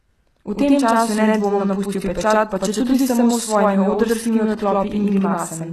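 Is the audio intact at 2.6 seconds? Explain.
No. At 2.6 seconds, as through the whole clip, the speech has a channel delay doubling. One side lags by about 92.9 ms, which fits a 4096-sample buffer, and once both sides fold to mono that late copy comes through as a distinct slap echo at the same level.

The treble is also off. There's nothing above 12.4 kHz, and the s sounds come out gritty and lispy, with brightness that doesn't quite match the lower harmonics. That's likely HE-AAC compression at a low bitrate, around 16 kbps, rebuilding the top end by copying lower bands upward.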